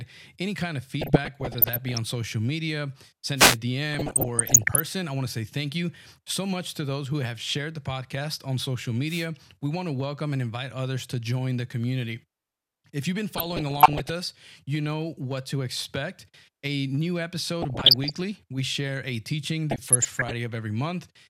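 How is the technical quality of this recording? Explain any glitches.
The recording has two recurring faults: bursts of DAB burbling and two short wireless microphone noise hits.

DAB burbling occurs at 1.0–2.0 s, 3.9–4.8 s (ending just before "I want to say"), 13.4–14.1 s, 17.6–18.2 s and 19.7–20.3 s. Weak reception let bit errors, under one percent, slip past error correction into the MP2 data. Corrupted samples put short blips of noise into single sub-bands, and corrupted scale factors make individual sub-bands leap in level, giving burbling over the speech.

Wireless microphone noise hits occur at 3.36–3.58 s, right after "social media", and at 9.06–9.27 s, right after "the podcast on social". The FM radio link faded as reflections cancelled, so receiver noise rose over the voice, heard as a brief swish of static about a fifth of a second long.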